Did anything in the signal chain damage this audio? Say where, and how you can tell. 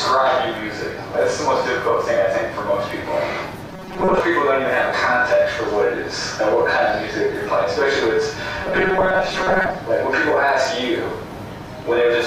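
Yes. At the driver or buffer stage, new audio likely arrived too seldom, so short chunks were replayed to fill gaps. This caused robotic sound from repeated short buffers at 3.71–4.20 s and 8.64–9.78 s: a rigid 188 Hz buzz, with about half the audio repeated.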